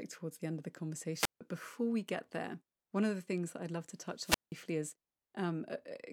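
Right at 1.14 s the speech drops out in a classic wireless microphone squelch dropout, running to 1.41 s, and it happens again from 4.20 to 4.55 s. The FM signal from the transmitter fades, you get a quick swell of hiss, and then the receiver's squelch shuts the output off, leaving a hole of near silence for about 155 ms the first time and 179 ms the second before the speech comes back.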